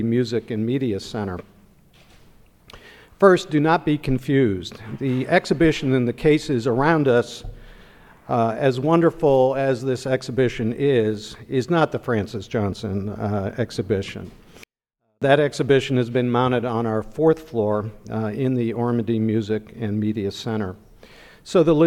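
From 14.64 to 15.22 s a 24-bit alignment error drops the sound about 48 dB, clean but nearly inaudible: 24-bit samples sitting in a 32-bit word's low bytes are read as full 32-bit values. The waveform collapses to a flat sliver, and the spectrogram goes abruptly dark.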